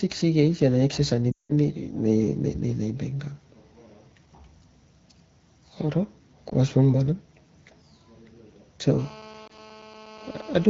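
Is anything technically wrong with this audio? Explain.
Yes. There are two kinds of fault: lost AMR speech frames in three places and GSM phone buzz near the end.

Lost AMR speech frames: The longest run is 1.32–1.52 s, right after "sik kana acces ani" and before "nei nei nei bang". It lasts about 180 ms, which fits nine 20 ms frames. Single frames drop at 6.49–6.53 s and 9.47–9.56 s. When frames arrive corrupted, the decoder repeats its last good pitch and vocal-tract settings while lowering the gain. The long run drops to near silence within two frames, and then speech returns briefly weak or rough. The single losses are only short dips or warbles. A plain network dropout would cut straight to silence instead of this fading fill.

GSM phone buzz: This runs from 8.99 to 10.65 s, about 22 dB below the speech. A nearby 2G handset on a call transmits bursts about 217 times a second, and the audio circuitry rectifies that radio energy. 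The result is a hard, raspy buzz at 217 Hz with dense harmonics. It stays steady and ignores what is being said. Its 217 Hz fundamental and gritty pulse texture set it apart from smoother 50 or 60 Hz mains hum. The single frame loss at 9.47 s falls inside this stretch. Underneath all of this, the HD Voice wideband codec at 12.65 kbit/s is audible only as light coding texture.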